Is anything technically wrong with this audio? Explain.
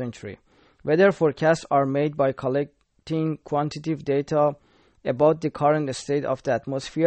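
Yes. MP3 compression damage runs throughout the speech, and it is plainly audible. The likely cause is a lossy MP3 encode at a very low rate, which fits a bitrate around 32 kbps. Starved of bits, the encoder drops everything above about 8.4 kHz, so the treble is gone, and it zeroes weaker frequency lines that flicker in and out between frames. That leaves a watery, swirling texture, dull sibilants and smeared consonant onsets.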